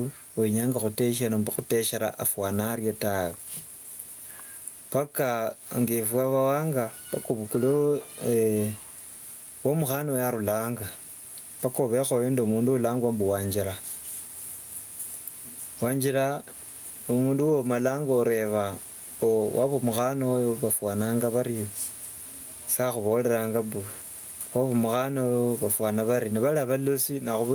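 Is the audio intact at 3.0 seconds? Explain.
No. At 3.0 seconds, as throughout the speech, there is gain pumping: the gain ducks by around 10 dB under each loud syllable, flattening the dynamics. The likely cause is gain set too high, with a fast limiter or compressor clamping every peak.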